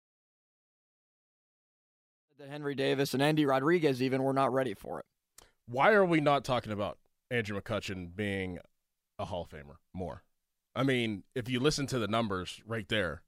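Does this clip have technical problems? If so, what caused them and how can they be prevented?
No, nothing in this speech recording points to a technical problem, so there is nothing to trace or prevent. The level rises in a smooth fade-in from around 2.5 s, reaching full level by 3.16 s with no click or abrupt edge.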